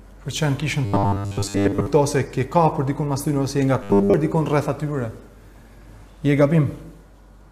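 Robotic sound from repeated short buffers occurs from 0.85 to 1.86 s and again from 3.83 to 4.14 s. Each stretch turns into a rigid, metallic buzz at 100 Hz. Most of the first stretch and all of the second are repeats. The likely cause is a 10 ms block replayed while real audio is skipped.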